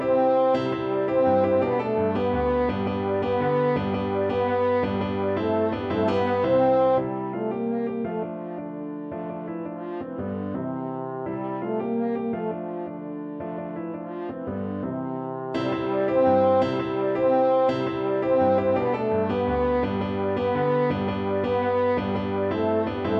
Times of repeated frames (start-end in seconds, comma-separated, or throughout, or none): none